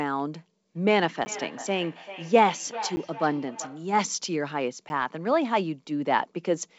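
Feedback echo between two devices runs from 0.75 to 3.96 s. A second device in the room plays back this microphone's signal, the microphone picks it up again, and neither echo canceller removes it, so the speech returns roughly every 0.4 s, peaking about 14 dB below the direct speech.

Blocks of digital silence fall at 1.25, 2.96 and 4.89 s, each 10 ms long. Each time, the output buffer likely went unfilled and zeros played in place of audio, with abrupt edges and no fade. At that length each gap is heard as a brief tick or dip, not a silence.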